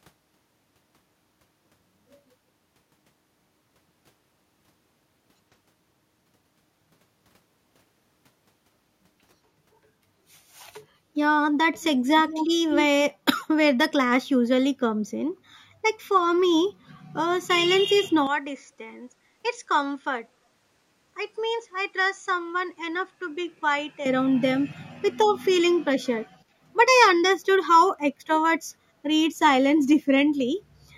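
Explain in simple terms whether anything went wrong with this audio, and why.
Two things go wrong. From 12.28 to 12.85 s there is an echo leak. A second copy of the voice trails the original by about 170 ms, almost as loud. It most likely comes from a loudspeaker on the far end whose echo canceller let some sound slip back.

From 18.27 to 24.06 s the input likely switched to a poorer device. The sound suddenly turns duller. It gets noticeably quieter and picks up a faint new background noise. There is no gap at the change.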